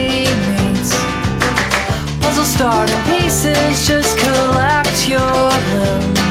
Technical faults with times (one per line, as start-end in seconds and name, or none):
none